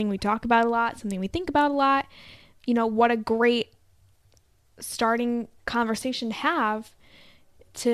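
No technical faults are audible anywhere in the speech.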